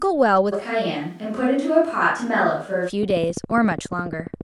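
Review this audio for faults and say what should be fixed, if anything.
From 0.54 s to 2.88 s the speech abruptly turns roomy and hollow, with thinner low end, then snaps back just as suddenly. This is a switch to a distant microphone: the close mic's signal most likely dropped out and a farther pickup, such as a camera mic, carried the audio instead. Level stays about the same, and the added room noise sits low, around 40 dB below the speech. To prevent it, secure the close mic's cabling and wireless link and monitor it continuously during recording.

From 3.03 s to 4.42 s a train of clicks runs over the audio: about twenty near-identical ticks at a steady 14.5 per second, peaking roughly 5 dB above the signal and audible regardless of what lies beneath. Pulses this regular point to a likely source in interference from nearby equipment or a faulty connection or power supply, injecting a transient at each cycle. 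To prevent it, move or shield nearby electronics and check connections and the power supply.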